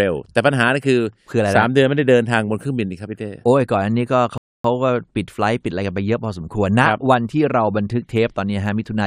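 At 4.38 s the speech drops into silence until 4.65 s. This is a rebuffering stall. The player ran out of downloaded audio and waited for more. About 0.27 s of dead air is added. The speech then resumes exactly where it stopped, with nothing missing.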